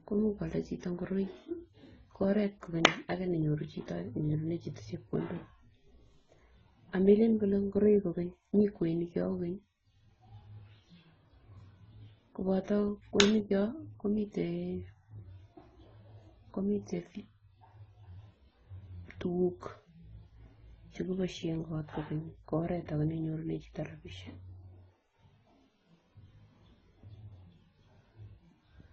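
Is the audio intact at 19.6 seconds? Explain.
No. At 19.6 seconds, as everywhere in this speech clip, the sound carries the smeared, swirly artefacts of one lossy codec overlaid with a second, different texture of coding noise. Nothing above about 7.9 kHz survives. That points to transcoding between lossy codecs, likely a low-rate AAC-LC encode (around 16 kbit/s) re-encoded as Opus (around 24 kbit/s). A single low-bitrate encode would show one consistent artefact character. Here the later codec spends bits re-encoding the earlier damage, so two distinct kinds are heard together, and the lower cut-off persists.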